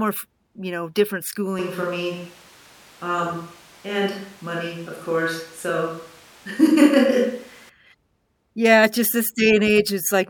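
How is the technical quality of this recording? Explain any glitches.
The recording has one clear fault: a switch to a distant microphone. It starts at 1.59 s, right after "f you know different", and lasts until 7.69 s. The sound then snaps back. The close pickup likely dropped out, and a mic farther away took over. The speech turns roomy and hollow at once. Bass thins out. Loudness stays about the same. Room noise sits roughly 30 dB below the speech. Both changes are abrupt.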